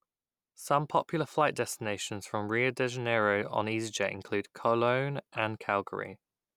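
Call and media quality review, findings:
No audible faults found in the speech path; nothing to attribute to capture, network or playback components.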